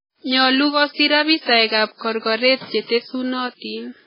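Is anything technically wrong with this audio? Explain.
Yes. Throughout, likely MP3 compression at a very low bitrate, around 16 kbps, starved the encoder: treble stops at about 5.3 kHz and dropped spectral detail leaves the speech heavily watery and swirly.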